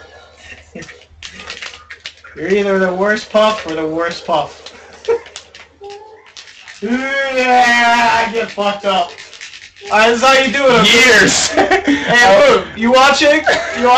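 From 5.87 to 9.87 s, channel delay (comb filtering) sets in: one channel runs roughly 20 ms late, and summing to mono cancels shared content at evenly spaced frequencies from around 30 Hz upward. The sound turns rough and slightly doubled, but the notches stay fixed rather than sweeping like a phaser, and no distinct echo is heard.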